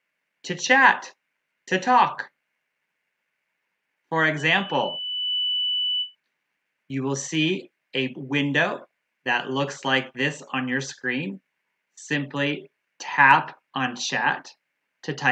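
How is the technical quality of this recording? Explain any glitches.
The recording has one clear glitch. Loudspeaker feedback squeal, 4.37 to 6.15 s: the microphone re-amplifies its own loudspeaker until a 3 kHz tone swells over about a second to roughly the level of the surrounding sound.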